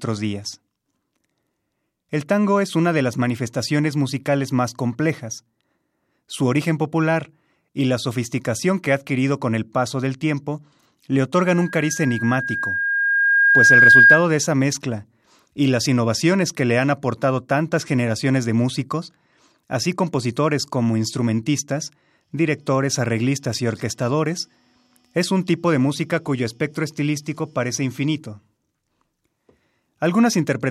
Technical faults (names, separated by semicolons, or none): loudspeaker feedback squeal